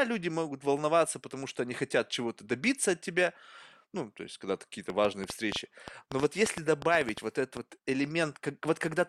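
From 4.9 s to 7.58 s there's a train of clicks sitting on top of the speech, around twenty of them at roughly 6.4 per second, but unevenly spaced rather than ticking like a metronome. They all have much the same sharp shape and poke out well above the speech, around 10 dB hotter, so you hear them in the gaps too. It's likely interference from nearby gear or a faulty connection or power supply.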